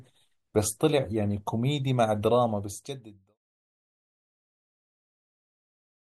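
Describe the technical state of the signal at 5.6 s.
At 5.6 s the audio is intact, with no fault present at that moment.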